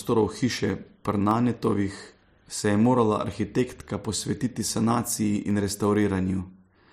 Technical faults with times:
1.31 dropped samples
5.50 dropped samples

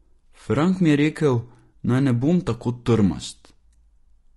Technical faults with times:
0.00-4.36 low-delay AAC compression

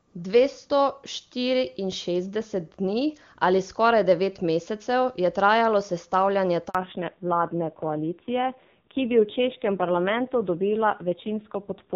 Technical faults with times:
6.69-6.75 handover gap
6.75-11.95 fallback to narrowband

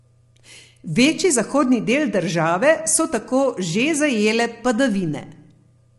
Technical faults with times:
0.00-5.98 low-delay AAC compression

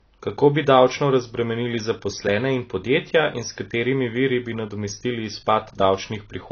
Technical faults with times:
0.00-6.51 low-bitrate audio saved at a high bitrate

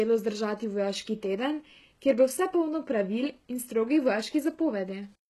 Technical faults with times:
0.00-5.29 HE-AAC compression

